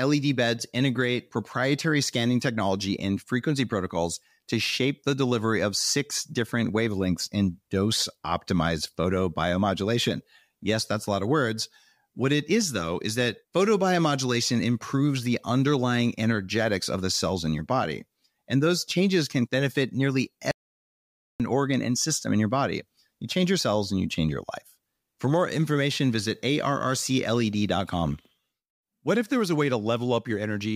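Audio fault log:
20.51–21.40 s, audio dropout to silence: right after "changes can benefit nearly" the speech cuts off abruptly and the signal falls to silence, with no room tone or hiss underneath, for about 0.89 s, then resumes mid-flow at "organ and system in". Whatever was said in that gap is simply missing. The likely cause is a brief loss of the input, such as a link dropout, a disconnect or a momentary mute, while the recorder kept writing silence.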